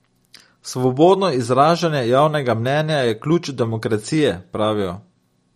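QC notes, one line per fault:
Throughout, MP3 compression: the encoder was likely starved of bits, at a rate that fits roughly 48 kbps, so it removed all content above 15 kHz and dropped weak frequency lines that then flicker in and out from frame to frame. On this speech the damage is plainly audible: sibilants turn swirly and metallic, the top end sounds dull and capped, and consonant onsets smear instead of landing crisply.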